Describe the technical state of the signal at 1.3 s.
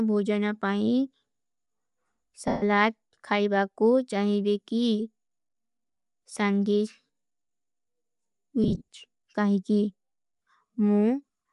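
At 1.3 s, as throughout, the speech shows plainly audible Bluetooth LC3 compression: a breathy, grainy upper band, likely from codec noise filling, which fits 48 kbps, 10 ms frames.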